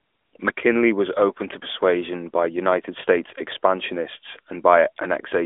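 From start to finish the speech has passed through the AMR narrowband mobile codec, which samples at 8 kHz and rebuilds the voice from a vocal-tract model excited by a few pulses per subframe. Nothing reaches above 3.7 kHz, and the line band sits between 250 Hz and 3.5 kHz, so the voice sounds thin and boxed in. The plainly audible buzzy, synthetic edge fits a mid-rate mode of around 10 kbps.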